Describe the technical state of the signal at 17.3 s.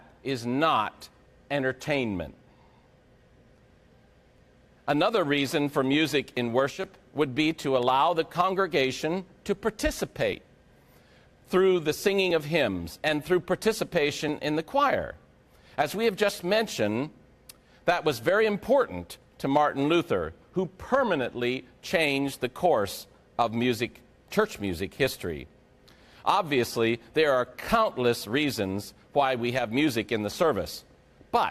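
At 17.3 s the signal is intact, with no dropout, clipping, distortion or other technical fault to be heard.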